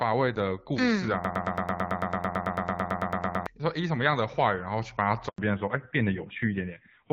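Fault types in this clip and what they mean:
Broken-record loop: likely a stalled player or stream resending its last held fragment, so a 0.11-second slice repeats about 20 times from 1.24 to 3.47 s.
Handover gap: the call switched networks and no speech frames arrived, so the audio drops to silence for 100 ms at 5.28 s.
Fallback to narrowband: the call fell from HD Voice to the AMR-NB narrowband codec, so from 5.38 s nothing above 4 kHz remains and the speech sounds duller and rougher.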